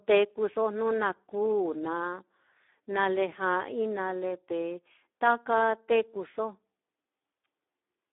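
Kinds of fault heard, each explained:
Speex codec: a CELP speech coder that rebuilds the voice from a predicted spectral envelope plus a sparse excitation signal. Here the excitation is starved of bits, giving a noisy, hoarse, strongly degraded voice throughout, consistent with a setting around 8 kbps. The audio sits in a narrow telephone-like band of roughly 250 Hz to 3.6 kHz, with nothing at all above 3.8 kHz, so no noise-like upper fill is present.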